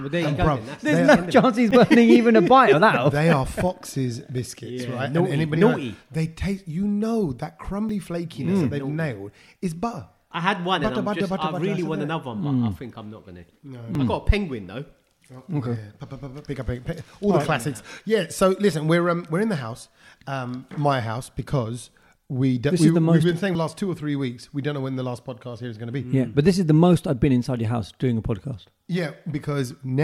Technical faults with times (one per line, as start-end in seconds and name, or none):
1.71 dropped buffer (overrun)
7.89 dropped buffer (overrun)
13.95 dropped buffer (overrun)
23.55 dropped buffer (overrun)